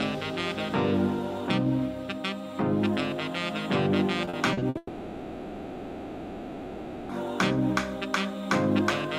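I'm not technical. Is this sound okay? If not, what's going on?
No. Two faults come back to back.

From 4.25 to 4.77 s there is repeated packet loss, which gives a robotic sound. Five small pieces of the sound go missing in quick succession. The longest is 60 ms. Each hole is patched by stretching the sound just before it. About a third of that half second is patched this way. It sounds choppy, with bits skipped.

Right after, from 4.77 to 7.11 s, the real sound stops for about 2.3 seconds. In its place you hear a smeared, buzzy continuation of the last sound, with only a tiny moment of true silence. When the real sound returns, that whole stretch is simply gone. The likely cause is a long network dropout, where nothing arrived for over two seconds.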